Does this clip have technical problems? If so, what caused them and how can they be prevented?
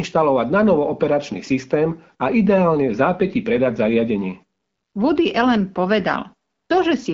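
No, nothing in this speech clip needs fixing; it carries the sound of the AMR wideband (HD Voice) codec at a rate that fits 12.65 kbit/s, with audio up to about 7 kHz and only the light coding texture expected at that setting.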